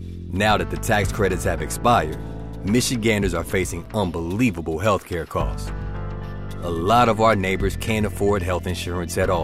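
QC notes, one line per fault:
3.85 s, block of digital silence: the signal drops to silence for about 5.8 ms and then resumes, with no fade on either side, which fits a 256-sample output buffer that was not filled in time. Because the cut and the return are both abrupt and the gap is so short, it is heard as a single tick or dip rather than as silence. On the waveform it shows as a near-flat line with vertical steps at each end, and on the spectrogram as a thin broadband vertical stripe.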